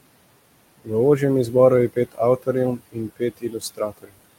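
Noise suppressor artifacts run through the whole clip. The suppressor pulls down the bands it judges to be steady noise by about 20 dB, frame by frame. The room noise sits about 17 dB below the speech. So the background sinks in the gaps and swells back under the talking.

Speech cut by the noise suppressor follows at 1.93 to 2.20 s, just after "ožjem izboru je". Here the suppressor mistakes part of the speech for noise. It drops it by up to about 19 dB, for roughly a tenth of a second. That sound comes out swallowed. It happens again from 2.77 to 4.15 s, dipping up to about 21 dB. Around half a second of speech goes faint.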